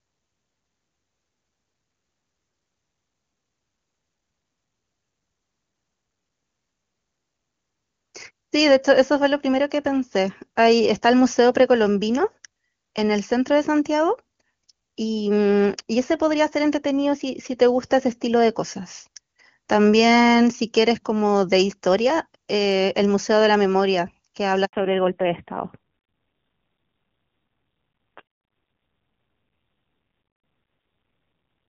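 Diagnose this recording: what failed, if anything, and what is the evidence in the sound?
At 24.65 s the speech cuts out abruptly, fading within a few tens of milliseconds, and stays silent for 80 ms until 24.73 s. This is a handover gap at the network stage. As the call switched from one network to another, no speech frames arrived while the new link was set up, so the decoder had nothing to play. Whatever was said in that 80 ms is simply gone.

From 24.73 s to the end, the speech turns duller and rougher, with nothing above 4 kHz. This is a fallback to narrowband at the codec stage. Before the switch, the wideband HD Voice path carries clear, full-bodied speech, consistent with AMR-WB near 23.85 kbit/s. After the handover the call renegotiated to a narrowband codec that cuts off at 4 kHz. The raspy texture points to AMR-NB at a low rate, around 5.9 kbit/s.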